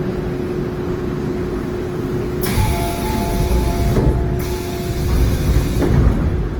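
A recording of everyday sound, with plainly audible damage throughout. Tones have turned rough, grainy and noisy, with less swirling than MP3. The spectrum still reaches about 20.1 kHz. This points to a likely cause of Opus compression in its music mode at a low bitrate near 16 kbps.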